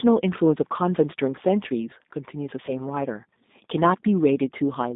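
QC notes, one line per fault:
Throughout: G.729 codec damage, plainly audible. The speech sits in a telephone band of roughly 200 Hz to 3.7 kHz, and its texture is slightly rough and synthetic, which fits an 8 kbit/s G.729A coder. That coder rebuilds each short frame from a vocal tract filter, a pitch predictor and a few pulses rather than the real waveform. On a spectrogram, energy stops sharply at 3.7 kHz with nothing above it, and harmonics look smeared and grainy.
2.66 to 2.73 s: VoIP packet loss concealed by the speech codec. About 20 ms of audio went missing, which fits two lost 10 ms frames. The decoder filled the gap by repeating its last pitch and filter at falling gain, so the sound is briefly stretched and fades before recovering. Because each frame builds on the previous one, the distortion lingers briefly afterwards. The waveform shows a short stretch with sagging amplitude.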